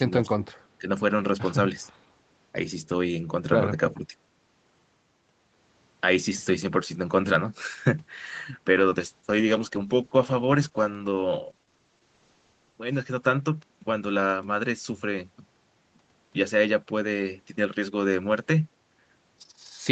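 Between 0.04 and 0.48 s, at 0.79 to 0.87 s, and from 3.93 to 4.14 s, the speech dips by about 15, 10 and 15 dB. This is likely speech suppressed in double talk, with the echo canceller mistaking the talker for loudspeaker echo and turning them down in short patches.

From 8.74 to 13.85 s there is a call bitrate drop. The Opus encoder lost bandwidth and coded far more coarsely, which fits a fall from 32 to about 11 kbps for nearly 4 s. The speech turns rough and watery and loses its top end below the usual 8 kHz limit.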